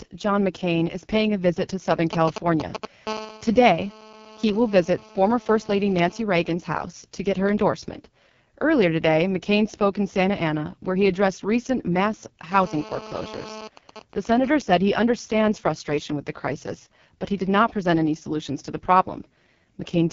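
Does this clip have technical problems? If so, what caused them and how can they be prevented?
Yes. The speech runs through an AMR wideband (HD Voice) codec at a very low rate. It sounds rough and raspy, with nothing above about 7.2 kHz, which fits AMR-WB's lowest mode, 6.6 kbit/s. A spectrogram shows a hard ceiling, with smeared, noisy harmonics and a thin band of noise-like fill just below it. To prevent it, use 12.65 kbit/s or higher.

GSM signalling bursts appear from 2.13 to 2.85 s, nearly as loud as the speech, and again from 13.77 to 14.74 s at a lower level, just before "he understands frustration with". A nearby 2G phone sends short groups of radio bursts, and the audio circuitry rectifies them. The first gives galloping ticks and brief 217 Hz buzzes, and the second, during a silent call, gives even ticks with a longer buzz twice a second. On a waveform these look like clustered spiky packets, and on a spectrogram like intermittent vertical striping. 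To prevent it, keep phones away from the recording gear or switch them to flight mode.

GSM phone buzz runs from 3.07 to 6.22 s at about −18 dB and from 12.51 to 13.68 s at about −15 dB, just after "he addressed recent mass". During a call, the phone transmits in bursts 217 times a second, and rectification of those bursts produces a harsh, steady buzz. A spectrogram shows evenly spaced horizontal lines at 217 Hz and its many harmonics. To prevent it, use shielded, balanced cabling and keep active phones well away.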